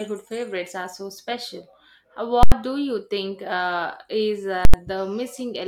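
At 2.43 s, just before "do you", and again at 4.65 s, there's invalid numbers at full scale. A calculation went infinite or invalid and got pinned at maximum for about 85 ms, which fits a 4096-sample block. Each sounds like a loud pop, a dead gap, then another pop.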